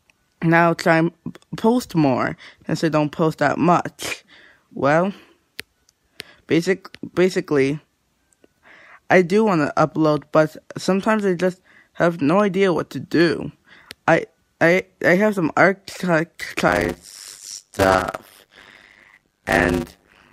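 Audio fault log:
16.68–20.32 s, block size mismatch (padded): one stage writes shorter blocks than the next stage reads, which fits 256 samples placed into blocks of about 480, with the remainder of each block filled with zeros. That drops a short silent gap into every block, so a buzz at 100 Hz, the block rate, runs under the sound. Because each block stretches out, the audio plays slower, at about 0.53 times normal speed, while its timbre stays the same.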